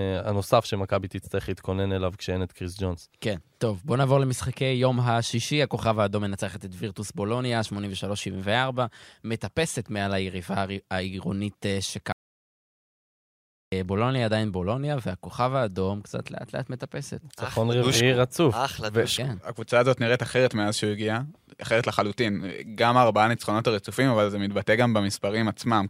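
At 12.12 s the speech cuts to dead silence until 13.72 s, an audio dropout to silence lasting 1.6 s, likely a lost input; waveform flatlines, spectrogram shows a blank gap.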